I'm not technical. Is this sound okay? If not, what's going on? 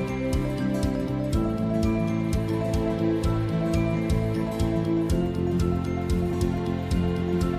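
No, there are three little hiccups where chunks of the audio simply never get played. These are compressed frames skipped: the file is stored in small blocks about 46 ms long, and a few blocks went missing or were rejected as damaged. Around 2.35 to 2.38 s it jumps ahead roughly a tenth of a second, around 3.93 to 3.96 s a bit more, and around 6.30 to 6.33 s about a fifth of a second.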